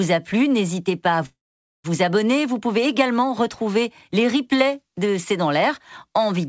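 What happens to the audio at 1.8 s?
At 1.8 s the audio is near the end of a call audio freeze spanning 1.26 to 1.86 s, just after "plu n'hésitez pas à". A brief trailing continuation decays into about 0.49 s of silence, likely from packets stalling and draining the jitter buffer. Speech then resumes 0.58 s late with nothing lost.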